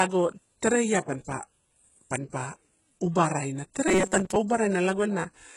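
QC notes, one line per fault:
throughout: HE-AAC compression. The treble sounds bright but gritty and metallic on s sounds; heavy damage that fits a low bitrate near 12 kbps. The likely cause is spectral band replication rebuilding the upper spectrum from copied lower bands.
3.88–4.37 s: robotic sound from repeated short buffers. Just after "panpa uba raina" the speech turns into a rigid metallic buzz at 188 Hz, with roughly half the audio repeated. Likely cause: late buffers filled by repeating the last few milliseconds.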